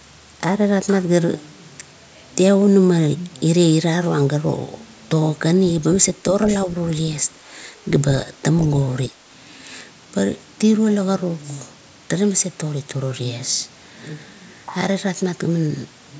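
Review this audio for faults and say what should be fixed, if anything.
Between 9.08 and 9.19 s the speech dips sharply for about a tenth of a second, sinking roughly 15 dB at its deepest. This is speech suppressed in double talk, likely caused by an echo canceller that mistook the near talker for loudspeaker echo while both sides spoke and pulled the level down. On a waveform it shows as a brief pinched notch in the envelope. On a spectrogram it is a short vertical band of faded energy against content that, as expected after call microphone processing, stops at 8 kHz. To prevent it, tune the canceller's double-talk detection so it holds near-end gain when both parties speak at once.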